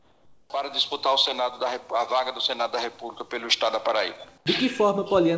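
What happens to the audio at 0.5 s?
Comfort noise in place of the background runs from 0.0 to 0.5 s, ending right at that moment. The sender likely stopped transmitting during the quiet stretch, and the receiver filled it with steady, featureless synthetic noise about 7 dB quieter than the real background, losing its detail.

The onset is clipped by the voice detector between 0.46 and 0.5 s. The detector was likely slow to register the returning sound, so about 40 ms of its beginning went unsent and comfort noise stood in. At 0.5 s the sound therefore starts abruptly, without its soft lead-in.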